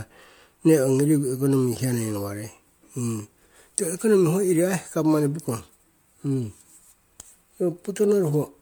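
Throughout, the speech carries generation loss, likely from about seven MP3 passes at 128 kbit/s: swirly, hollow, blurred attacks, with a spectrogram showing speckled holes below a 20.1 kHz ceiling.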